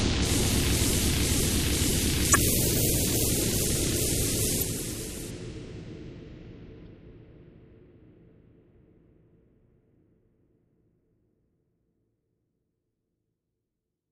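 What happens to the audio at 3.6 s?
At 3.6 s the audio carries the same damage it has from start to finish: the encoding was likely starved of bits by MP3 compression at a rate that fits about 64 kbps. Short of bits, the encoder zeroes quieter frequency lines, which flicker on and off between frames. The result is plainly audible: a watery, swirling texture and smeared onsets.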